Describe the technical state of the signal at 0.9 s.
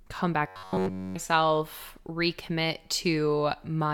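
At 0.9 s the signal shows robotic sound from repeated short buffers, lasting from 0.47 to 1.15 s. Fresh audio likely stops arriving, so a short slice of about 10.7 ms repeats throughout. That imposes a fixed 93.8 Hz metallic buzz on the speech.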